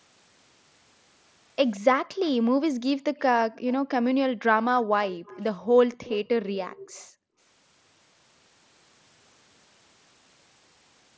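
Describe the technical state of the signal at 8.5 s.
At 8.5 s the speech signal is intact, with no fault present at that moment.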